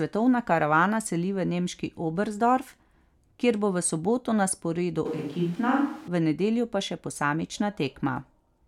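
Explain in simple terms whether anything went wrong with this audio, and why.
Between 5.06 and 6.08 seconds there is a switch to a distant microphone. The close microphone likely dropped out and one farther away took over. The speech suddenly sounds hollow and roomy, loses low warmth and picks up background noise, while its loudness barely changes.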